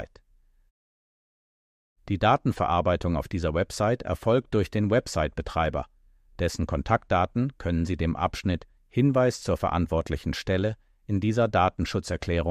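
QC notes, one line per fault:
No faults found.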